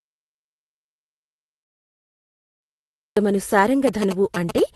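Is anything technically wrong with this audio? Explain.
Yes. Two faults are present.

From the very start to 3.17 s there is an audio dropout to silence. The input was likely disconnected or muted while the recorder kept writing silence, so the clip opens in dead silence with no room tone before the speech suddenly cuts in.

From 3.87 to 4.60 s there are GSM signalling bursts. A nearby 2G phone exchanging short radio bursts with the network is rectified by the audio circuitry, producing a galloping dit-dit-dit of short 217 Hz buzzes roughly 10 dB below the speech.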